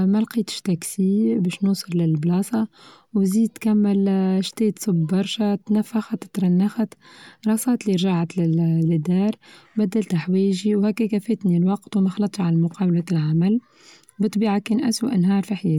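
No technical faults can be heard anywhere in the recording.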